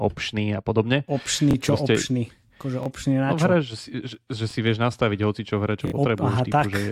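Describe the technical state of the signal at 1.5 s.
A repeated buffer runs from 1.51 to 1.53 s: new audio arrived late, so the device replayed its last block, about 23 ms, which fits a 1024-sample buffer. That slice of speech sounds twice with a hard join, a brief stutter, and roughly 20 ms of audio is lost.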